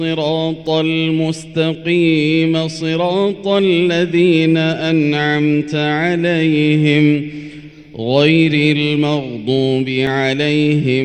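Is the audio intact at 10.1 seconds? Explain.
No. At 10.07 s a block of digital silence interrupts the audio: for about 1.65 ms the stream holds only silence where signal should be. The waveform drops straight to silence and jumps back with no fade on either side, so each edge is an abrupt discontinuity. With a gap this short, the two edges merge into a single sharp tick rather than an audible hole in the sound.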